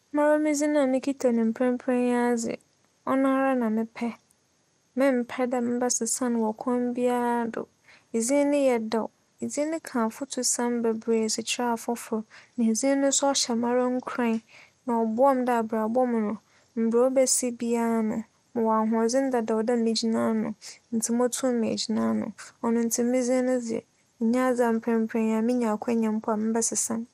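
MP2 compression affects this speech recording from start to finish: nothing is present above about 15.9 kHz, and a gurgling, granular roughness sits on the voice, likely from Layer II coding at a low rate near 80 kbps starving its sub-bands of bits.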